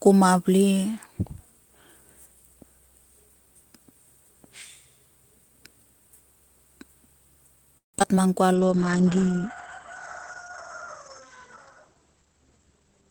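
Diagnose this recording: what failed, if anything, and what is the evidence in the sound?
Choppy, robotic sound from 7.77 to 8.18 s: repeated packet loss at the network stage, four gaps (longest 164 ms) patched by extending earlier sound.

From 8.47 to 8.70 s the speech drags at unchanged pitch, about 87% speed: a jitter buffer slow-down repeating pitch periods to add 38 ms.

From 8.54 s onward the sound turns muffled and rough: a call bitrate drop from 32 to 11 kbps, with the codec's bandwidth narrowing from 20 kHz to 8 kHz.

Speech hurries from 12.13 to 12.89 s at about 118% speed, same pitch: a jitter buffer speed-up trimming pitch periods, roughly 150 ms removed.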